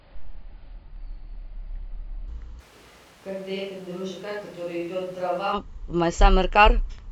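A section at the wrong speed runs from 0.00 to 2.28 s of this speech clip. The opening plays at 0.658 times its recorded rate, so pitch and tempo fall together, roughly seven semitones lower, and the voice sounds deep, dragged and sluggish before it snaps back to normal pace. The likely cause is that this stretch was played or conformed against the wrong clock rate during editing or playback. A switch to a distant microphone follows from 2.61 to 5.52 s. The voice abruptly turns roomy and hollow, loses low-end body and drops roughly 10 dB, while background room noise rises to sit only around 20 dB below the speech. The sudden change in and back out points to the close microphone's signal likely dropping out or being left out, with a farther pickup such as a camera microphone covering that span.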